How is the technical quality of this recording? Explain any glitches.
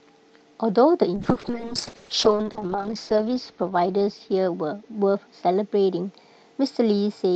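The recording has one clear glitch, a call bitrate drop. From 1.21 s to the end, the call's bandwidth estimate collapsed, forcing the Opus encoder to code very coarsely, which fits a fall from roughly 64 to 6 kbps. The speech turns rough, watery and muffled, worst for about 1.8 s at the lowest rate.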